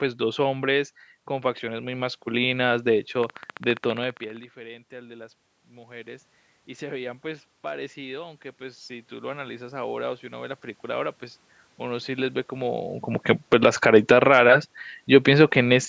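From 3.24 to 4.44 s a train of clicks rides over the speech: about twenty near-identical pulses at a steady 15 per second, standing well above the signal and audible in the gaps too. That regular, repeating shape points to a likely source in electrical interference or a faulty connection rather than random crackle.

Between 6.79 and 11.12 s the automatic gain rises. The input level had dropped by about 17 dB, and the gain control slowly added about 8 dB back. Unlike a talker leaning in, the room noise swells with the speech over several seconds.

From 13.31 to 14.32 s the automatic gain falls by about 6 dB, with the level sinking over roughly a second. Because the background noise drops along with the speech, this is gain control reacting, not the talker moving away.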